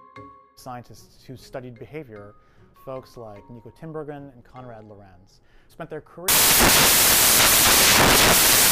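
At 6.28 s the audio collapses into loud, harsh broadband noise that lasts to the end at 8.71 s: samples built from the wrong bytes. The reader misassembles each sample, so the rapidly changing low-order bits land in the high-order position and dominate every value. On a waveform the section becomes a dense block. A spectrogram shows broadband energy spread across the frequencies.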